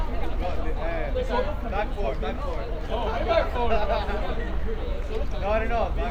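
No technical faults are audible.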